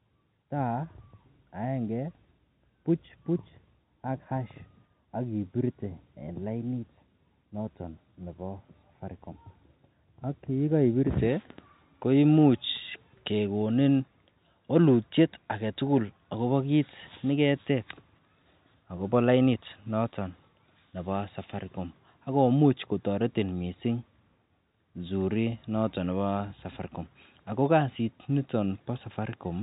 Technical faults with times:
none

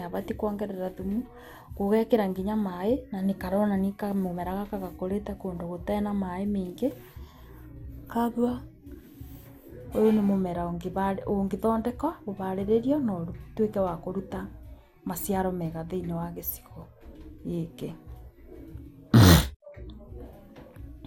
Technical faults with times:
0.00-21.07 generation loss

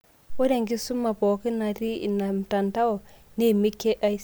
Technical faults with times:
none

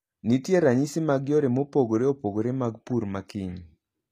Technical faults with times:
0.00-4.11 HE-AAC compression

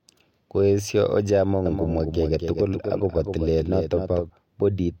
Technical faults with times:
1.66-4.30 doubled audio track

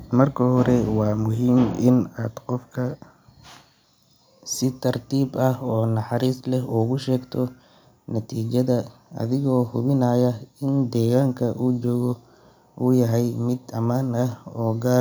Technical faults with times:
none

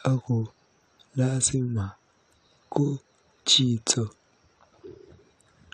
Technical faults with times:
0.42-0.53 compressed frames skipped

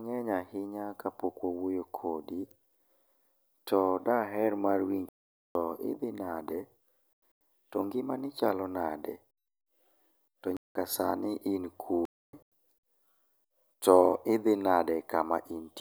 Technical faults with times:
5.09-5.55 corrupt frame muted
7.13-7.41 corrupt frame muted
10.57-10.75 corrupt frame muted
12.05-12.43 corrupt frame muted

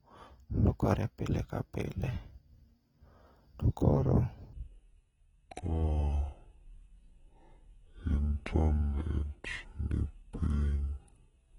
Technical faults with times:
0.00-11.58 AAC compression
4.53-11.58 section at the wrong speed

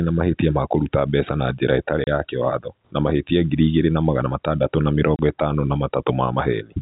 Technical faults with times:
2.04-2.07 packet loss filled with silence
5.16-5.19 packet loss filled with silence

